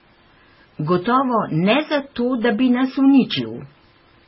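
Throughout, the speech is dull, with nothing above 5.6 kHz, and layered smearing and warbling artefacts, most likely from transcoding between lossy codecs such as MP3 and AAC.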